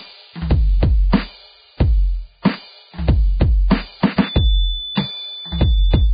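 Throughout the music, the encoding most likely ran as Vorbis at a very low bitrate, around 15 kbps. Nothing survives above about 4.9 kHz, and the treble that remains is quantised into noise, so the music sounds dull yet hissy and grainy, with roughened tones and smeared attacks from this heavy compression.

From 4.14 s to the end, a loudspeaker-to-microphone loop likely sits just short of feedback. A feedback whistle rings at a steady 3.5 kHz, about 15 dB below the music: a thin single-pitched tone behind it that never builds into a howl.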